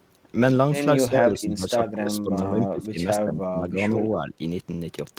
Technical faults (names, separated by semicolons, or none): speech suppressed in double talk